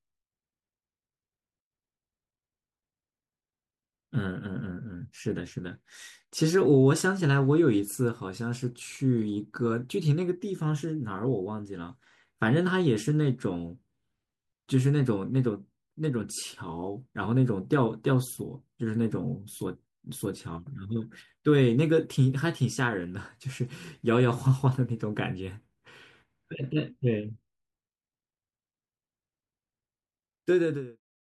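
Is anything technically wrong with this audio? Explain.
No, nothing is technically wrong.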